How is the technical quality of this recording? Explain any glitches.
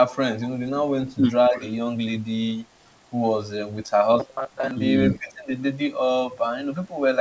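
The recording has three kinds of call-path glitches, clustered around 1.1 to 1.7 s, 4.2 to 4.7 s and 5.1 to 5.5 s. Throughout, the audio stops at 8 kHz, the bandwidth of a wideband call.

Echo leak, at 1.08 to 1.14 s, 1.54 to 1.74 s and 5.11 to 5.32 s: The far end's echo canceller likely failed to remove part of what its microphone picked up from its loudspeaker, and sent it back. This returns a copy of the speech 275 ms late. It is barely audible at first, then clearly present around 1.6 s, and fainter again near 5.2 s.

Speech suppressed in double talk, at 1.49 to 1.62 s and 5.16 to 5.5 s: With both sides active, the echo canceller likely could not tell the talker from the returning echo and turned everything down. The speech dips by roughly 10 dB in the first instance and roughly 15 dB in the second.

Robotic sound from repeated short buffers, at 4.20 to 4.71 s: Audio arrived too rarely, so the receiver likely kept replaying the last fragment while most of the real audio was skipped. 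This imposes a rigid 133 Hz metallic buzz, which fits repeats of roughly 7.5 ms.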